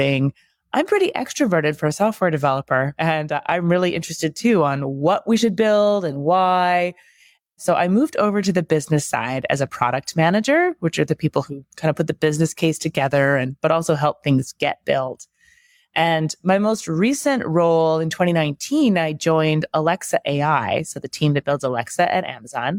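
Nothing here needs pointing out, as the speech runs along without a single technical fault to flag at any moment.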